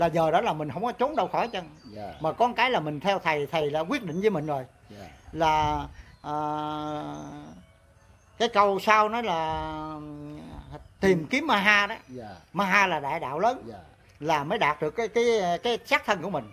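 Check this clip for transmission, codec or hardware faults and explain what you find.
No faults can be heard.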